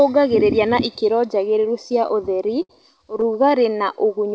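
From 2.08 to 2.71 s the speech stutters with repeated stalls. Packets arrived late, so the jitter buffer kept running dry. Six times the last sound was stretched to fill the wait, about 115 ms in all. The longest hold is 70 ms and fades out. Nothing is lost, but the speech drags. From 3.17 to 3.52 s it happens again, with five shorter holds of at most 14 ms, heard as a brief stutter. Through the G.722-style call path, nothing sounds above 8 kHz.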